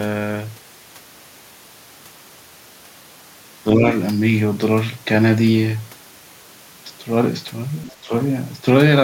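A speech clip with brief echo-cancellation faults. Speech suppressed in double talk dips the talker slightly at 3.75 to 3.84 s, and by roughly 10 dB at 8.02 to 8.12 s, likely from an echo canceller ducking overlapping talk. The other side's voice leaking through appears very faintly at 7.88 to 7.92 s, likely residual loudspeaker echo.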